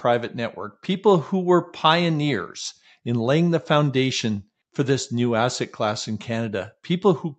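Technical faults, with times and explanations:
Nothing to flag here; the speech simply comes through an ordinary call connection, with its top end rolling off at about 8 kHz as that link is set to do.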